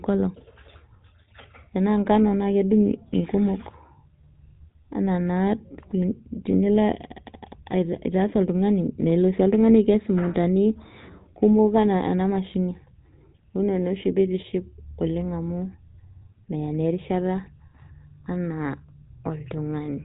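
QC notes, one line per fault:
Throughout: GSM full-rate codec. Buzzy, gravelly speech from coarse pulse-driven excitation at a bitrate suggesting 13 kbps; spectrogram shows a hard ceiling near 3.8 kHz.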